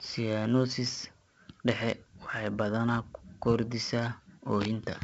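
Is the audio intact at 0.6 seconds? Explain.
No. At 0.6 seconds, as throughout the clip, the speech carries heavy 4-bit ADPCM compression damage. Each sample is coded as a coarse 4-bit step from a prediction, so a gritty hiss follows the loud parts. Nothing reaches above 7.8 kHz, which fits a 16 kHz sample rate, and the speech sounds dull.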